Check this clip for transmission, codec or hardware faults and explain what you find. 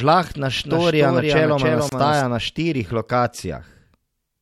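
Two faults are audible in this speech clip.

From 0.57 s to 2.21 s there is a doubled audio track. A second full-band copy of the speech trails the original by roughly 300 ms, about 5 dB quieter. It has no reverberant tail and cuts in and out abruptly. The cause is likely a second capture through a slower path being mixed back in.

At 1.89 s to 1.92 s, just before "na štirih", there is a gap at a join of encoded pieces. Continuous speech drops into a silence of about 28 ms with smeared edges. The sound then resumes where it stopped. Separately encoded segments were joined without trimming the encoder's start delay and end padding.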